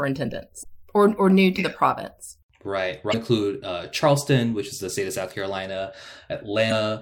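Damaged data in a compressed stream hits this speech clip three times: parts of the encoded stream arrived corrupted, so the decoder misread or rejected those frames, lost sync and had to hunt for the next valid frame header. Each time this leaves a brief disturbance of about 40 ms, heard as a chirp, squawk, click or short gap, at 0.62 to 0.66 s, 3.10 to 3.14 s and 6.68 to 6.72 s.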